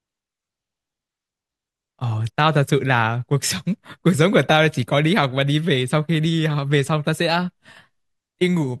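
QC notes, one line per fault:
No faults found.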